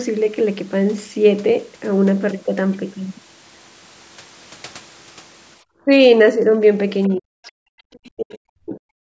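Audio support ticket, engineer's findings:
Speech suppressed in double talk: 5.85 s brief dip of about 10 dB; 7.09 to 7.5 s and 7.91 to 8.93 s, near-dropouts of about 40 dB. Likely echo canceller ducking the near talker while far end spoke.

Other side's voice leaking through: faint scraps at 7.04 s and 7.45 to 7.52 s, far below the talker. Likely residual loudspeaker echo the canceller failed to remove from the mic.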